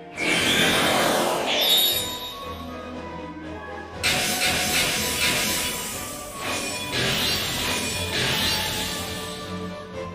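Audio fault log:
No faults heard anywhere in the audio.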